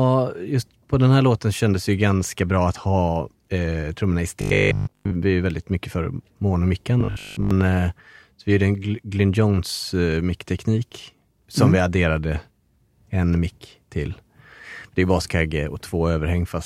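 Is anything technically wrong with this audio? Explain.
Yes, there are two short bursts of robotic sound from repeated short buffers in this speech. The first runs from 4.41 to 5.13 s, right after "ha eh trummorna i" and before "är väldigt mycket för". The second runs from 7.01 to 7.51 s, after "väldigt mycket för monomick" and before "eh så vi gjorde". Both become a stiff, metallic buzz at 50 Hz that loosely tracks the talking. That's likely the playback repeating a 20 ms chunk when fresh audio arrives late, so most of the real signal in those stretches gets skipped.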